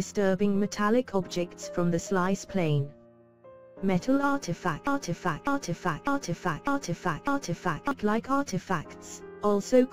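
A broken-record loop runs from 4.87 s to 7.91 s: a fragment of about 0.6 s repeats exactly, back to back, five times, so the sound sticks in place for roughly three seconds before moving on. Whatever should have played during that stretch never arrives and is simply missing. The likely cause is a player, encoder or stream that stalled and kept resending the last chunk it had buffered instead of new audio.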